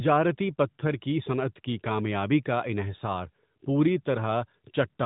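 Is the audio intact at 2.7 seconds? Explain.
Yes, the speech at 2.7 s is intact, with no fault at that moment.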